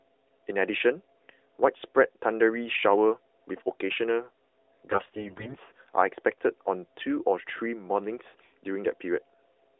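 From 4.92 to 5.56 s, AMR bit errors corrupt the less protected bits of what sounds like every 20 ms frame in that stretch, roughly 15 percent of them flipped. Misplaced excitation pulses and wrong fine pitch, gain and spectral values turn the narrowband speech hoarse, scratchy and gargly, though pitch and level roughly hold.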